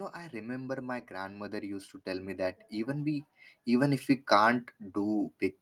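Automatic gain rising from 0.15 s to 4.06 s: the gain control judged the input too quiet and raised its gain gradually by about 13 dB. Because it acts on the whole signal, the speech and the background noise swell together over those four seconds.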